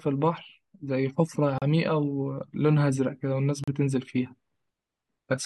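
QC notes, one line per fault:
1.58–1.62 s and 3.64–3.68 s, gap between stream segments: speech briefly cuts to dead silence with hard edges, about 37 ms and 38 ms. Timestamps of adjacent segments don't meet, so the player inserts silence. The spacing fits 2-second segments, and nothing of the speech is lost.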